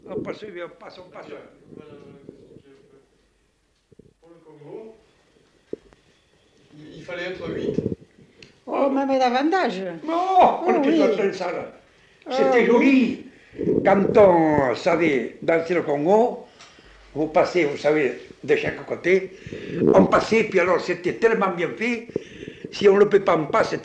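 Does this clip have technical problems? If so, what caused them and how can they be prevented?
No technical faults are audible.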